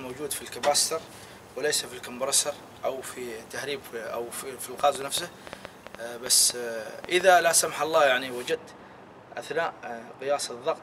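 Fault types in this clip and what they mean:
Train of clicks: A burst of short, similar pulses rides over the sound from 4.80 to 7.22 s. They come at about 5.8 per second, but the spacing is uneven, so the ticking never settles into a steady beat. There are roughly fifteen of them. Each one pokes out around 10 dB above the sound beneath it. The likely cause is interference from nearby equipment or a faulty connection or power supply.
De-emphasis applied wrongly: From 8.51 s to the end, the top end falls away smoothly. A treble cut meant to reverse pre-emphasis has landed on audio that never had any, or has been applied a second time. The slope reaches about 14 dB down at 10 kHz compared with 1 kHz. The result is a dull, muffled tone with the brightness drained out.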